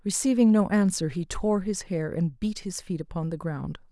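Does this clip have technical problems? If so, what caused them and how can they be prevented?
No, this clip has no technical problems, so there is nothing to prevent.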